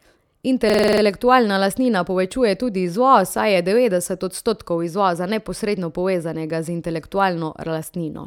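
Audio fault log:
0.70–1.02 s, system hang loop: The speech freezes into a rapid stutter. One 46 ms slice of sound repeats exactly, about seven times, at 21.5 times a second. That length fits a 2048-sample buffer. The system stalled while the sound hardware kept replaying the same ring buffer. A loop this long sounds like a machine-gun rattle rather than a steady buzz. Essentially no audio is lost once playback resumes.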